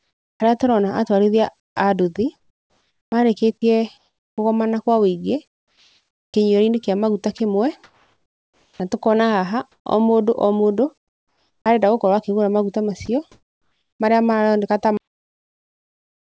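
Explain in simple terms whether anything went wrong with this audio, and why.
Several things went wrong, in four separate faults.

From the start to 11.66 s, just before "arenda gũkorwo", the speech is chopped by the voice detector. Quiet syllables and word edges keep vanishing and are replaced by a flat hiss, about 4.4 seconds of it in total across this stretch. The speech sounds choppy. The likely cause is the sender's speech detector repeatedly deciding the talker had stopped and halting transmission.

At 13.06 s a short piece of sound is dropped by the voice detector. About 20 ms of speech disappears and is filled with steady noise instead. It is a brief gap, but the speech is clipped at that point. This is likely the detector mistaking a soft part of the speech for background and switching off just long enough to lose it.

From 13.06 s to 14.0 s the real background is replaced by comfort noise, about 0.7 seconds of it. 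The natural room sound gives way to a smooth, featureless hiss. This is likely the call system sending nothing during the pause and the receiving end generating artificial noise to avoid dead silence.

At 14.97 s the recording has a cut-off end. The sound stops abruptly mid-sound and falls straight to digital silence for the remaining time, with no natural fade. The final chunks of audio were never written out, so the clip simply ends early. Throughout, the sound also has no content above 8 kHz, which is what the G.722 call codec carrying it allows.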